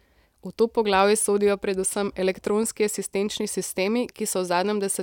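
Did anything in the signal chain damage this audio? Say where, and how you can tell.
No, no signal-chain damage heard.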